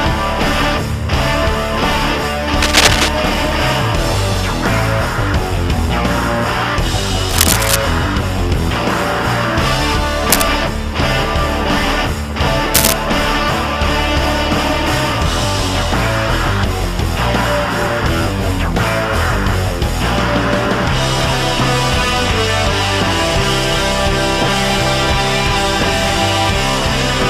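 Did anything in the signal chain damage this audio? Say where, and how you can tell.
Yes: scratchy, rustling bursts at 2.62–3.10, 7.29–7.76, 10.30–10.49 and 12.74–12.93 s. This is cable scratch noise, likely a worn connector in the analogue wiring.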